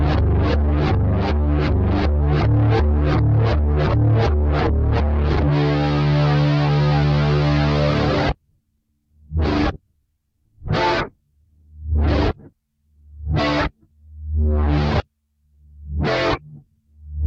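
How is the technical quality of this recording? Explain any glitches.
The recording's signal is technically sound, with no audible glitches, dropouts or other defects anywhere in the audio.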